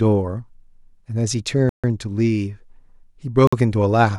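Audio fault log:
1.69–1.84 s and 3.47–3.53 s, Bluetooth stall: the speech drops to silence for about 144 ms and then 51 ms, then resumes where it stopped. This is likely a wireless link stall, where delayed packets let the receiver's buffer run empty until retransmissions arrived.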